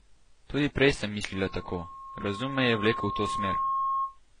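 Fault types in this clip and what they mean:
Transcoding between lossy codecs, throughout: nothing above 10 kHz, and two layers of coding artefacts are heard together. The likely cause is a low-rate HE-AAC encode re-encoded as AAC-LC, with each pass adding its own damage while the lowest cut-off survives.
Loudspeaker feedback squeal, 1.32 to 4.19 s, right after "prej sem": a 1.1 kHz tone swells over about two seconds until it sits at roughly the speech's level. The microphone is picking up its own loudspeaker, and the loop gain at that frequency exceeds one.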